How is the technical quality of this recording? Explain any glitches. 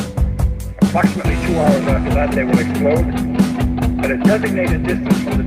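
No technical faults are audible.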